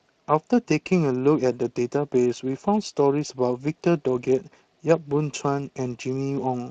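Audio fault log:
Throughout: Speex codec. The speech sounds plainly hoarse and grainy because this CELP coder has limited bits to describe the excitation signal beneath each vocal tract model. The damage fits a mid-range setting of about 22 kbps.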